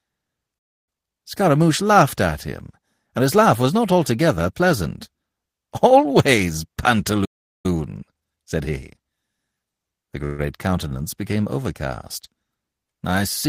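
At 0.58 s the speech drops out until 0.89 s, about 0.28 s of silence in mid-flow. This is a playback stall, likely the player's buffer running dry or its thread being blocked. On a waveform it appears as a flat line cut abruptly into the speech envelope, and on a spectrogram as a vertical band empty of all energy, with harmonics stopping and restarting at hard edges.

From 0.89 to 1.17 s the speech comes back hurried at twice normal speed with pitch unchanged. This is time-compressed catch-up: the player trims its backlog by removing short slices and cross-fading the joins, so syllables crowd together. The spectrogram shows formant patterns squeezed in time but not shifted in frequency, with small discontinuities at the splice points.

A second stall, likely from the same cause, runs from 7.25 to 7.66 s, about 0.39 s of silence. It is followed by gentler catch-up at 1.25 times speed from 7.66 to 9.22 s. 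That stretch sounds briskly rushed, and its waveform is only mildly compressed.

At 10.25 to 10.41 s, just before "countenance became overcast", there is a call audio freeze, likely from packets held up in transit emptying the jitter buffer. For about 0.14 s the last sound is drawn out as a fading buzz or hiss rather than silence. The speech then resumes with nothing lost, only delayed. On a spectrogram this shows as a smeared horizontal continuation of the preceding spectrum that gradually weakens, and the waveform shows a decaying repetitive texture instead of a gap.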